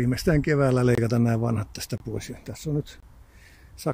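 At 0.95–0.98, 1.98–2.00 and 3.00–3.03 s, hard-edged 25 ms holes recur every second: a gap between chunks. Unlike a dropout, nothing is lost, and the sound resumes exactly where it stopped.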